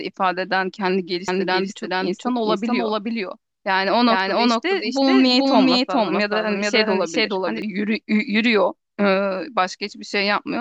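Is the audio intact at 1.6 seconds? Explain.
No. At 1.6 s the clip is inside a doubled audio track that runs from 1.28 to 7.62 s. A second full-band copy of the speech trails the original by roughly 400 ms at about the same level, so every syllable is heard twice. It has no decay or room colouring, and it switches on and off abruptly at the span's edges. The likely cause is the signal being captured a second time through a slower path.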